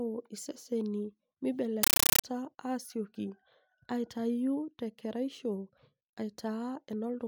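From 1.83 to 2.24 s, loud chattering static replaces the speech. It is a compressed stream played as audio. Its 31 bursts a second suggest undecoded AC-3.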